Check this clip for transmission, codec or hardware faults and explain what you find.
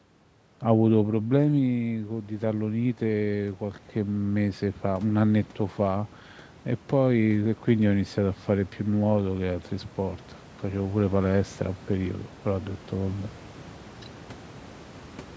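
One fault stands out, an automatic gain rising. From 0.97 to 6.07 s the voice and the room noise behind it swell together, slowly climbing by about 8 dB. Around 1 s the talker moved away from the microphone, dropping the input level by about 9 dB. The automatic gain control responded by gradually raising its gain, lifting the background along with the voice.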